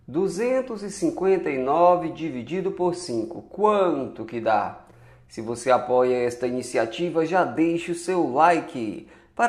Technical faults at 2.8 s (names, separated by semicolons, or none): none